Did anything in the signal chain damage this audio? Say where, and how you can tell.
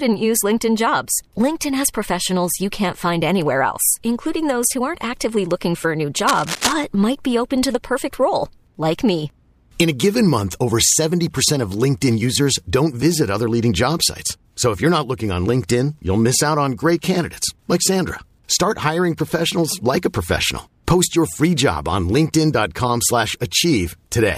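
Yes. From 6.27 to 6.73 s, between "looking for a new" and "might be open to", cable scratch noise rustles just under the speech level. In the analogue wiring, a worn connector likely shifted and its contact resistance jumped. A spectrogram shows ragged broadband bursts, and the waveform shows spiky fuzz.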